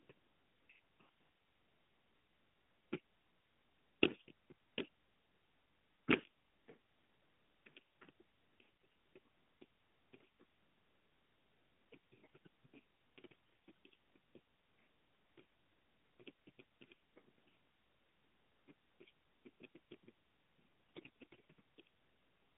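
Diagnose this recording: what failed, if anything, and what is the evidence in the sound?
Hoarse, gargly scratch at 8.85 s, 13.24–13.71 s and 20.96–21.40 s with pitch roughly kept: AMR bit errors, a weak network link flipping less protected pulse and gain bits.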